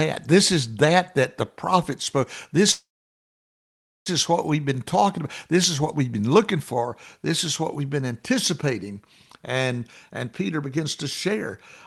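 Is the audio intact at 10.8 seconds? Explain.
No. From 10.09 to 11.35 s a jitter buffer speed-up is under way: with too much audio queued, the receiver repeatedly cut out short pitch-period pieces, about a fifth of a second in all, so the speech plays about 15% faster at unchanged pitch and sounds hurried.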